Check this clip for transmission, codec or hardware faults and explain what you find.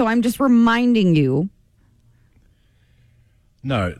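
Nothing in this speech recording points to a fault. There is nothing further to report.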